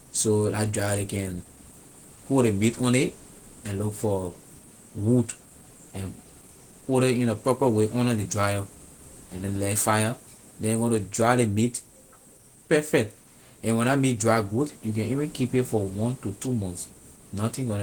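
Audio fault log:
Throughout, Opus compression: the speech has a muffled, hoarse quality with grainy, rough edges where the detail should be clean, and it's plainly audible the whole way. That mix points to Opus running in its hybrid speech mode, likely at a low rate, which fits around 16 kbps. Full bandwidth is still there, reaching up to about 20.1 kHz, but the encoder is filling the upper bands by folding lower ones or with noise instead of real detail.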